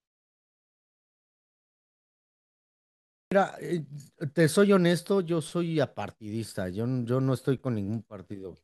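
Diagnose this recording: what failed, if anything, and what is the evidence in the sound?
Clipped start after a pause, at 2.94 to 3.32 s: after about 2.9 s of silence from the top of the clip, the speech starts abruptly, with roughly 375 ms of its opening missing. This points to the playback stage. The output device went idle during the silence and needed time to wake and lock again, so the first part of the speech was swallowed before audio resumed. Muted pauses in the background are not the issue here, since no speech is lost that way.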